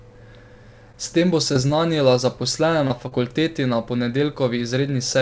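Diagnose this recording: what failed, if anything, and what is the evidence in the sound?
Brief smears and wobbles occur at 0.92, 1.53 and 1.67 s (each just after "tem bo"), 2.87 and 3.08 s. This is short concealed packet loss in the network stage: 20 ms gaps, 40 ms at 3.08 s, which the decoder bridged by extending the preceding sound.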